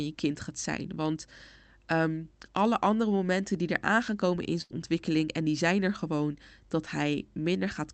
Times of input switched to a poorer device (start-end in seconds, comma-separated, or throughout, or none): none